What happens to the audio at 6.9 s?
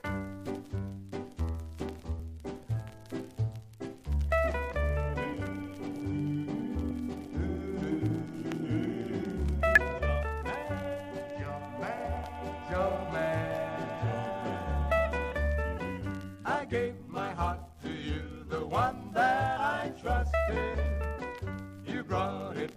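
At 6.90 s there is damaged data in a compressed stream. The decoder hits corrupted bytes, misreads the frame and loses sync until it finds the next valid header, which produces a brief chirp, squawk, click or short hole. A plain dropout would fall silent.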